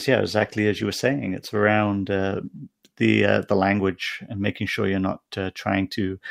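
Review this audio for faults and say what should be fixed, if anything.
There's a call bitrate drop from 0.4 to 2.71 s: the bandwidth estimate fell, so the encoder went from 64 to 26 kbps and coded the speech coarser and duller for about 2.2 s. Smoother bandwidth estimation and a higher minimum bitrate floor would keep that from happening.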